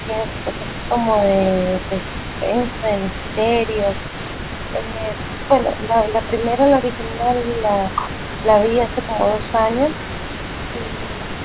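From the start to the end of the clip, a faint second copy of the speech trails the original by about 0.24 s. It sits roughly 15 dB below the main voice. This is an echo leak. The likely cause is a far end playing the call on a loudspeaker, with its echo canceller letting part of the pickup through. The residue returns as a delayed shadow.

Three short dips follow, at 4.76 to 5.14 s, 5.48 to 5.91 s and 6.97 to 7.22 s. The speech drops by around 5 dB in brief patches, a tenth to a third of a second long. This is speech suppressed in double talk. Both sides were likely talking at once, and the canceller turned down the wanted voice along with the echo. Everything sits under a 4 kHz ceiling, which fits a narrowband G.711 call path.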